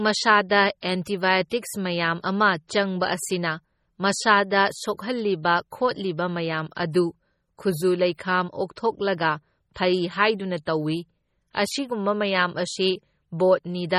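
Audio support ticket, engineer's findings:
Whole clip: watery, swirly texture on speech, metallic chirps on s sounds, smeared onsets. Heavy damage. Likely MP3 compression at a low bitrate, consistent with around 32 kbps. Too few bits, so weak frequency lines drop in and out frame to frame.

Pre-echo at 1.05 s, 1.50 s and 5.43 s: brief hiss, 15 to 17 ms, just ahead of sharp attacks, which sound softened. Transform codec spreads quantisation noise across the block, filling the quiet moment before each attack.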